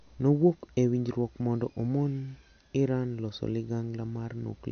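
From start to finish the speech shows plainly audible damage from MP3 compression, likely from an encoder starved of bits, which fits a low bitrate around 50 kbps. Weak frequency lines dropped and restored from frame to frame give the sound a watery, unstable texture, and the onsets of syllables come across smeared rather than sharp.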